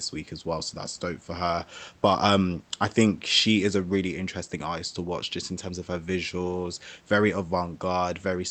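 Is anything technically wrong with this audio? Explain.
No, nothing's wrong here: it's speech that came over a call link, with the top end stopping at 8 kHz in a way that fits Opus at around 32 kbps, and a little room noise sitting about 36 dB below the speech.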